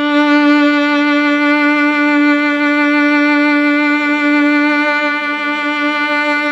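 Listening through the music, nothing stood out as a technical problem at any point.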